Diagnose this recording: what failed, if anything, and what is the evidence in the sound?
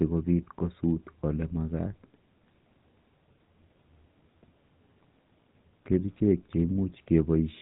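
Codec stage: GSM full-rate codec throughout. Nothing above 3.8 kHz, plus a buzzy, gravelly roughness from pulse-excited vocal-tract modelling, which plain band-limiting never adds.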